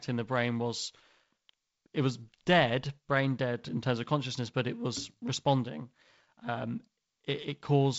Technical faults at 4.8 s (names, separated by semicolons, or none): none